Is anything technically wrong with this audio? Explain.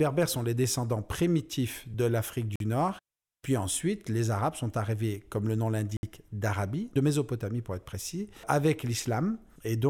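Yes. Twice the speech drops out, most likely from a Bluetooth stall, where delayed wireless packets let the playback buffer run empty. It goes silent at 2.56 to 2.60 s (46 ms) and again just after "arrivés comme le nom" at 5.97 to 6.03 s (62 ms), then resumes.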